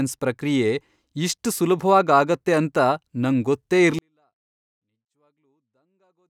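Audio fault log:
3.99–6.29 s, 24-bit alignment error (too quiet): speech stays clean but drops abruptly by about 48 dB, because 24-bit samples in 32-bit words are read as full 32-bit values.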